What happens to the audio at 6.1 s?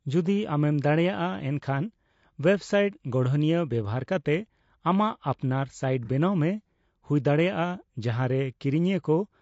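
Right around there, from 6.05 to 6.10 s, there's a brief AAC frame loss with concealment. A chunk of the coded stream, about 30 ms, which fits a single lost frame, never reached the decoder, so it patched the hole by reusing the last good spectrum with scrambled phase and smoothed-out energy. You hear it as a quick smeared, noisy, phasey blip rather than a clean dropout.

Underneath that, the whole stretch carries plainly audible low-delay AAC compression, likely AAC-ELD at a rate around 32 kbps. The short frames it works with can't pin down pitch harmonics well, so the sound comes across rough and grainy, with noise filling in between the harmonics and a top band that sounds thinned out and a bit synthetic.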